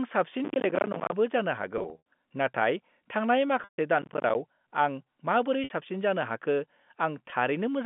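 From 0.45 to 1.12 s and again from 3.99 to 4.35 s, processor overload crackle tears through the sound. Missed deadlines on buffers of around 10 ms each drop out to silence, giving a gritty, irregular crackle rather than held tones.

Packet loss with pitch repetition occurs at 1.78–2.02 s, 3.64–3.77 s, 5.64–5.70 s and 7.30–7.32 s. The lost stretches are bridged by repeating the last pitch period, which sounds like a briefly held, buzzy tone that fades out, not clicks. The first of these is scattered over 280 ms, with its longest gap 80 ms.

Throughout, the G.711 telephone line limits the band to about 150 Hz–3.5 kHz.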